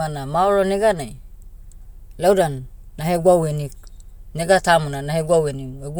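No technical faults are audible.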